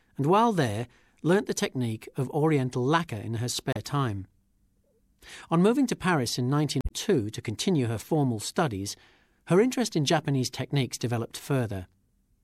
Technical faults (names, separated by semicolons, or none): damaged data in a compressed stream